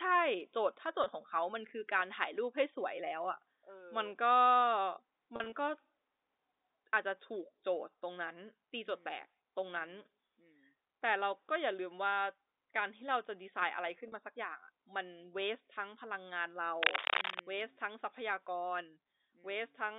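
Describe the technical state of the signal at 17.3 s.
Cable scratch noise runs from 16.80 to 17.42 s, so 17.3 s falls inside it. Dense, uneven bursts of crackle and rustle ride over the speech, sitting roughly 5 dB above it for about 0.6 s. The likely cause is a worn cable, connector or control being moved, its contact resistance jumping rapidly and injecting those noise bursts into the line. Beneath it, the narrow 300 Hz to 3.7 kHz telephone band of the G.711 coding carries on.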